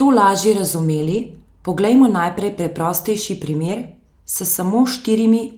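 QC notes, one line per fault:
1.01–1.19 s, lost packet rebuilt from error correction: right after "to lažje", a run of lost packets, roughly 100 ms of audio, was filled from low-bitrate redundant copies carried in the following packets. There is no dropout, but the speech turns briefly coarser and grainier.
3.67–3.73 s, lost packet rebuilt from error correction: after "poglejmo najprej preprostejši", a shorter loss of about 40 ms was patched the same way. It shows as a brief rough, noisy blip.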